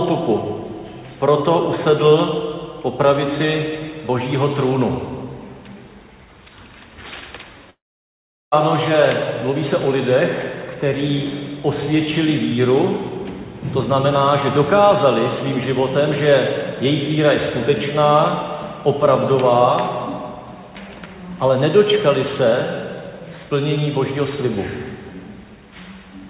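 At about 2.07 to 2.22 s there's a loud pop, actually two in quick succession, peaking a few decibels above the surrounding sound, which carries on underneath. That's a sudden voltage step or pulse getting into the signal, likely from a plug, switch or static discharge.

Then from 7.7 to 8.54 s you get a long network dropout. Roughly 0.8 s of audio never arrived. The receiver stretches the last bit into a brief fading buzz, then sits in silence for about 750 ms before the audio resumes, with that chunk simply gone. It's likely packet loss on the link, over a call path whose nothing-above-4 kHz band limit fits G.711 A-law at 64 kbps.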